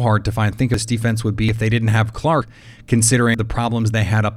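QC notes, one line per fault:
0.74 s, dropped buffer (overrun): an abrupt jump in the speech, likely from samples being overwritten before capture, skipping roughly a third of a second.
1.49 s, dropped buffer (overrun): the speech jumps forward by roughly a fifth of a second, likely a missed buffer joining the two sides directly.
2.42 s, dropped buffer (overrun): a small skip of roughly a tenth of a second, with no silence, likely from an overwritten capture buffer.
3.34 s, dropped buffer (overrun): a jump, roughly a third of a second of speech gone, likely lost to a buffer overrun before readout.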